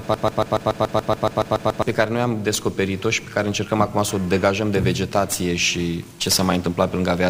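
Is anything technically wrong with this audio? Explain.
Yes. From the start to 1.82 s there is a broken-record loop, already running when the clip opens. A 142 ms fragment repeats exactly, back to back, twelve times. The player, encoder or stream likely stalled and resent its last fragment. The audio meant for that span is lost.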